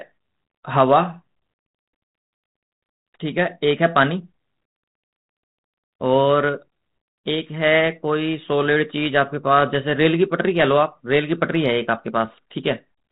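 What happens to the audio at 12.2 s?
Nothing goes wrong at 12.2 s; the speech runs on intact through that moment, carried by the same band-limited 32 kbit/s G.726 ADPCM telephone coding as the surrounding audio.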